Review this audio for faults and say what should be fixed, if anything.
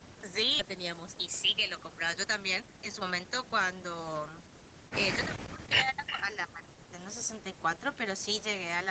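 Skip ahead at 0.59 to 0.61 s: the speech jumps forward with no fill, and roughly a second of material is missing. The two sides of the cut are butted together almost directly. A late burst of audio either overflowed the jitter buffer or was lost in transit, so the receiver discarded the backlog and resumed from newer audio. Sizing the jitter buffer for the network's real delay spread, and smoothing delay on the link, would prevent this.

Jitter buffer speed-up from 1.15 to 4.30 s: the speech runs at about 117% speed with unchanged pitch and sounds hurried. Across that stretch roughly half a second is trimmed away, one or a few pitch periods at a time. The buffer had filled beyond its target, as happens when delayed packets arrive in a clump, and the receiver shortened the audio to bring latency back down. Steadier packet delivery, or a slower and gentler drain policy, would prevent this.

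Speech suppressed in double talk from 5.25 to 6.93 s: the voice is turned down, at its deepest by about 40 dB, with roughly one and a half seconds affected in total across this span. The likely cause is an echo canceller facing both parties talking at once. It could not tell near-end speech from loudspeaker echo, so it attenuated everything. Better double-talk detection, or less aggressive residual suppression, would prevent this.

Echo leak at 6.06 to 6.13 s: a brief delayed copy of the voice can be heard, trailing the original by 334 ms and only about 5 dB quieter than the speech. It likely comes from a loudspeaker endpoint whose echo canceller left part of the microphone pickup uncancelled and sent it back. More accurate echo-path delay estimation, faster convergence of the canceller, or using a headset would prevent this.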